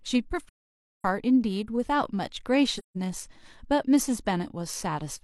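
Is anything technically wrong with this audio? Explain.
Yes. There is AAC frame loss with muting at 0.47 to 1.05 s and 2.78 to 2.97 s. Lost frames were decoded as silent spectra, so the overlapping windows fade the speech out and back in. This leaves soft-edged holes, about 0.55 s and 0.17 s long.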